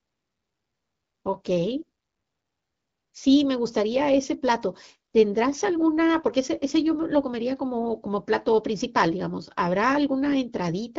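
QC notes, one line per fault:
Nothing to flag on this speech clip; it's carried over the AMR wideband (HD Voice) codec at 12.65 kbit/s, a rate at which that codec keeps speech clear.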